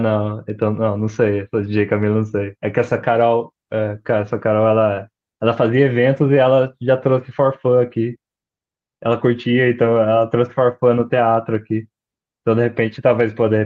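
No technical faults are audible at any point in the speech recording.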